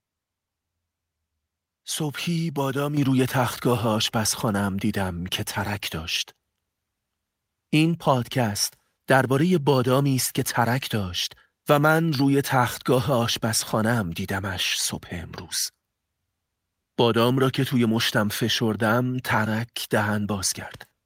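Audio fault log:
2.97 s, microphone volume stepped up. The level jumps by about 6 dB in a single step. The voice and the background noise rise together, so the room itself seems to get louder at that instant. This points to the call software judging the microphone too quiet and raising the device's input volume at once, instead of easing it up gradually. The higher level then holds.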